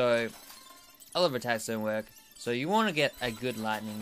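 Nothing in this clip stands out as a technical fault; it runs along without any glitch worth pointing to.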